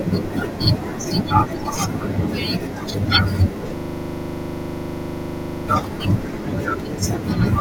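At 3.77 s the speech gives way to a system hang loop that lasts until 5.68 s. The computer or audio driver stopped delivering new sound, but the output hardware kept replaying its ring buffer. A single 40 ms slice of speech repeats exactly, dozens of times. It cycles 25 times a second, so it comes across as a rough, rapid stutter with a buzzing edge. Normal speech returns at 5.68 s.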